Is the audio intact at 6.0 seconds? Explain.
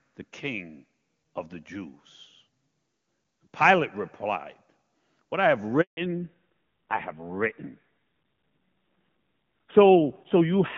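No. Just after "I have", a handover gap runs from 5.81 to 5.97 s: for 160 ms no speech frames arrive while the call switches networks, so the audio fades out within a few tens of milliseconds and stays silent until the new link comes up.

At 5.97 s, a fallback to narrowband begins and runs to the end of the clip, so at 6.0 s the audio is band-limited. Everything above 4 kHz is gone and the speech sounds duller and rougher. This fits a drop from AMR-WB at around 23.85 kbit/s to AMR-NB at around 7.4 kbit/s.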